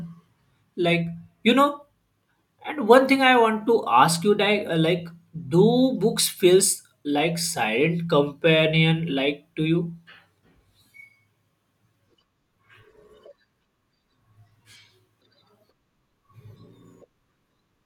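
Speech recording with no technical faults audible anywhere.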